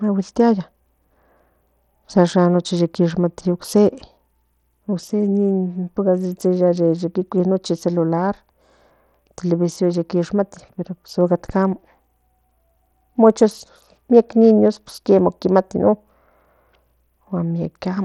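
From start to finish, the speech carries plainly audible coding damage, likely from Bluetooth SBC compression. The treble thins out and flickers in and out. A gritty, granular noise clings to the sound. Aliasing rides on the sound as well. The codec splits the signal into a few wide bands and shares too few bits among them. The top bands starve first. The rest are quantised coarsely. The damage suggests a low bit pool, around 80 kbps.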